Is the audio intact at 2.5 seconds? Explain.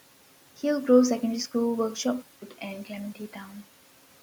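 No. From 2.22 s to the end, the system likely switched its input to a poorer device. The change shows as a 200 ms silence at the switch, followed by a narrower band, so at 2.5 s the speech sounds duller and boxier than before. The level stays about the same, and the new device's own background noise sits far below the speech, beneath the room noise already present.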